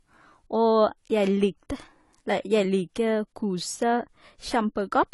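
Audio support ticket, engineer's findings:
Likely AAC compression throughout, consistent with AAC-LC at around 32 kbps: band-limited with nothing above 11.5 kHz, so the speech sounds dull and smeared, with plainly audible codec damage.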